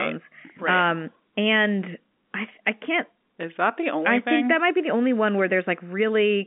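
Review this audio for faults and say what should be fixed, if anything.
No faults; nothing to fix.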